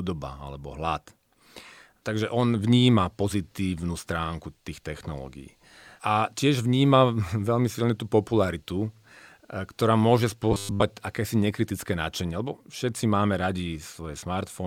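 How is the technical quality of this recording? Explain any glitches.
One glitch stands out: robotic sound from repeated short buffers between 10.52 and 10.83 s. The likely cause is audio arriving too late, so the playback software kept replaying the last short slice, here about 10 ms, while the real audio in between was skipped over. With most of that stretch made of repeats, the slice length imposes a fixed 100 Hz buzz, and the speech turns rigid and metallic, still loosely tracking its shape.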